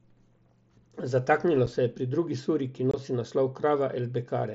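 Unconcealed Bluetooth headset packet loss cuts a 7.5 ms hole at 1.66 s, before "se je pri drugi", and a 22.5 ms one from 2.91 to 2.94 s, between "pri drugi suri ki" and "nosi naslov". The second fits three lost headset frames. The gaps drop to silence or an idle pattern with hard edges rather than being smoothed or filled with repeated sound, which separates them from concealed loss.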